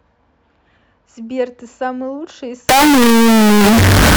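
Float read as integer, from 2.69 s to the end: the speech abruptly turns into a harsh, very loud, nearly square waveform sitting at an almost fixed, high level. Background noise becomes as loud as the speech, though pitch stays traceable. This likely reflects 32-bit float samples read as 32-bit integers.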